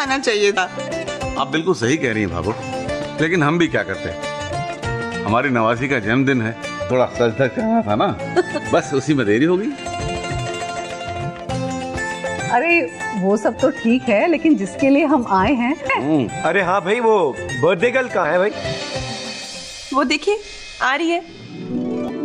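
Damaged data in the compressed stream corrupts a few frames, so the decoder misreads them, loses sync and has to hunt for the next valid frame header before playback resumes. In this audio that produces four brief glitches: single glitches at 0.56 s, 6.90 s and 15.88 s, each about 18 ms long, and a slightly longer one from 22.08 to 22.11 s. Each is a short disruption cutting into the audio.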